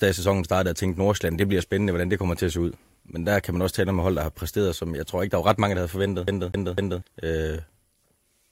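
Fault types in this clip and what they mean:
CD stuck on one turn: 6.27 to 7.02 s, the laser jumps back each revolution, replaying one 0.25 s slice of speech three times.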